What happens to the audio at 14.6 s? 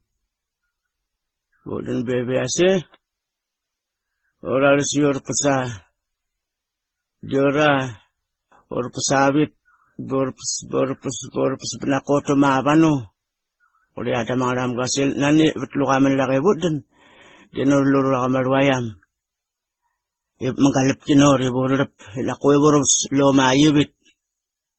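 At 14.6 s the speech carries the same fault heard through the whole clip: transcoding between lossy codecs. Nothing sounds above 7.8 kHz. Smeared, swirly artefacts from different codecs stack together, which points to a likely chain of low-bitrate MP3, AAC and Opus encodes.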